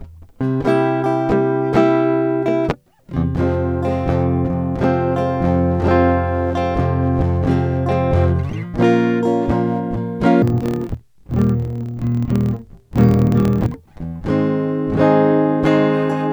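Interleaved audio read as planar affects the music from 10.42 s to 13.75 s. Each block of alternating left and right samples is split into halves, the first treated as left and the second as right, so both channels play their content at half speed. With 26.12 ms blocks, the music drops an octave (12 semitones) and sounds doubled and choppy, chopping at the 38.3 Hz block rate.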